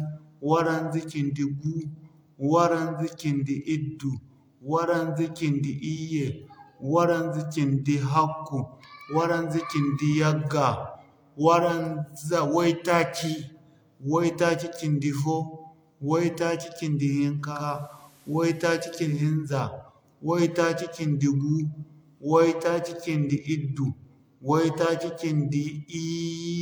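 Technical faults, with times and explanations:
17.37–19.34 s, digital radio blending to analogue: the receiver loses the digital stream and cross-fades over about 370 ms to the station's FM broadcast, then returns. During that stretch a steady hiss appears, roughly 35 dB below the speech. Loudness does not change. The gradual fade in and out, and the hiss arriving with the blend, set it apart from a simple dropout or a codec bandwidth switch.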